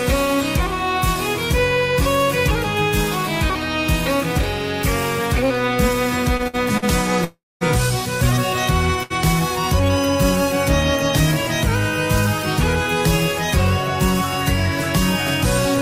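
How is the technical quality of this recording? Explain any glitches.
The recording has three delivery glitches clustered between 6 and 9 seconds. In each, the audio pauses and then resumes where it stopped, so nothing is skipped, but timing is disturbed.

From 6.37 to 6.84 s there are repeated stalls (stutter): four separate gaps, the longest 61 ms, about 149 ms in total. Packets kept arriving behind the playback rate, so the jitter buffer emptied repeatedly and the receiver extended the previous sound each time. The repetition makes the audio drag and judder, unlike a single hold.

From 7.24 to 7.63 s there is a call audio freeze lasting about 366 ms. The last sound is carried on as a fading buzz or hiss and then about 210 ms of silence, after which the audio picks up exactly where it left off. The likely cause is packets held up in transit long enough to drain the jitter buffer. The single long break with a silent tail sets it apart from the brief stutters.

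At 9.03 to 9.12 s there is a short stall from a late packet. One packet missed its deadline, so the receiver stretched the current sound for about 72 ms before continuing. It is heard as one sound held slightly too long with a slight buzz or dip, with no silence and no repetition.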